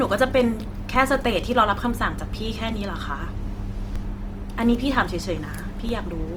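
From the start, the speech has a rough, grainy texture. Steady vowels carry a noisy haze. The high end stays open, reaching about 20 kHz. This points to Opus compression in its music mode at a low rate, likely near 24 kbps. The encoder keeps each band's energy. When bits run short, it fills detail with folded or noise-like content. That trades clean tone for grain.

At 0.96 s, a low thump marks a DC step. The waveform's zero line jumps suddenly, and the jump is heard as a knock. The offset then drains away over a fraction of a second, as a roughly 5 Hz high-pass would let it. The same thump returns at 3.96 s and at 5.89 s. Each time, the speech carries on unchanged over it.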